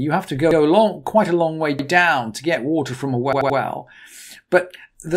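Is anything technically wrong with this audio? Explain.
Yes, there are repeated buffers: an 85 ms chunk replays at 0.51 s after "have to", at 1.79 s after "quite a long way", and three extra times from 3.33 to 3.58 s after "get water from a". Fresh audio arrived late, so the last block, which fits a 4096-sample buffer, looped with hard joins, giving a stutter.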